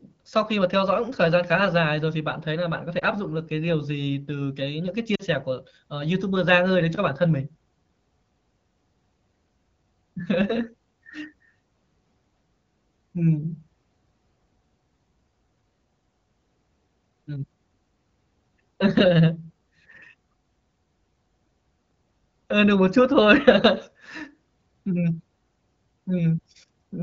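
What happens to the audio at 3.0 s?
At about 2.99 to 3.04 s a single lost AMR speech frame, 20 ms of failed data, makes the decoder repeat the previous pitch and vocal tract settings at reduced gain. It sounds like a brief dip or warble, seen as a short amplitude notch in the waveform and a momentary smeared, flattened patch on the spectrogram.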